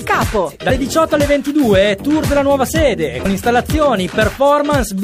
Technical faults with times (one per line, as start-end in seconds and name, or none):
0.65-0.71 compressed frames skipped
3.21-3.26 compressed frames skipped